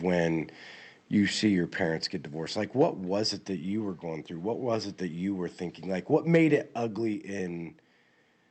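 At 2.04 s, between "when you see your" and "get divorced like", the whole signal drops by about 3 dB. This is a microphone volume step-down, likely the call software cutting input gain. At 2.81 to 2.84 s, just after "get divorced like", peaks run about 1 dB past the converter's limit. This microphone overload, likely from input gain set too high, flattens a few percent of samples and adds a harsh crackle. A second overload follows "were thinking like what", from 6.34 to 6.55 s, about 2 dB over, with a brief gritty edge. At 7.14 s the level steps down again by about 3 dB.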